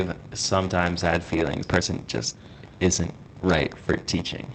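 A steady buzz at 93.8 Hz runs under the whole recording, and the speech drags at 0.938 times normal speed while its pitch stays about where it should be. This is a block size mismatch (padded). One stage hands over shorter blocks than the next one reads, and the shortfall in each block is filled with silence. The resulting tiny gap recurs at the block rate, which fits 512-sample reads being fed blocks of roughly 480 samples. The padding adds time to every block, so the speech runs slower.

At 1.63 to 1.65 s, right after "sometimes had", the speech jumps straight ahead with no audible gap, and the two sides are spliced almost directly. This is a skip ahead. About a second of speech that was already queued was thrown away, most likely by the jitter buffer dropping a backlog. The discard cut roughly a second from the playback delay in one step.

From 1.70 to 4.26 s the speech sounds rushed, at about 119% speed with unchanged pitch. 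This is a jitter buffer speed-up. Too much audio had built up in the buffer, so the receiver repeatedly removed small pitch-period-sized slices to catch up. Over that stretch it removed around half a second in total. Throughout, the Opus call path limits the top end to 8 kHz and adds its usual coding noise.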